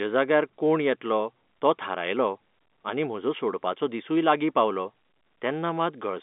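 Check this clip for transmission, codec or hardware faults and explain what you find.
No faults turn up in this clip of speech, which comes through G.711 telephone coding with its usual band limit near 3.8 kHz.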